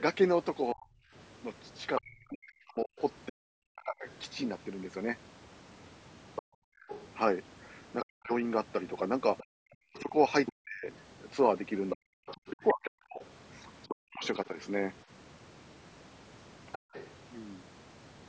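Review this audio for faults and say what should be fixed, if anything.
Speech suppressed in double talk, 0.73–4.07 s and 8.04–14.57 s: the speech dips by around 40 dB for roughly two seconds in each span, likely because the echo canceller turned both sides down during overlap. Improving double-talk detection so the canceller keeps near-end speech while the far end plays would prevent this.

Other side's voice leaking through, 1.97–4.13 s, 6.35–14.46 s and 16.72–17.09 s: a second voice sits about 10 dB below the speech, and about 15 dB below in the last span, likely because residual loudspeaker echo escaped cancellation. Better acoustic isolation or stronger residual echo suppression would stop this.

Background gated by the echo canceller, 6.42–6.88 s and 16.78–16.93 s: the room sound drops about 40 dB while the loudspeaker plays. Gentler suppression or comfort noise during those moments would keep the background steady.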